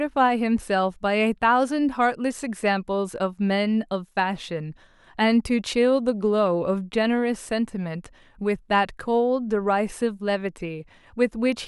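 Nothing technically wrong turns up anywhere in this short speech recording, so there's nothing to flag here.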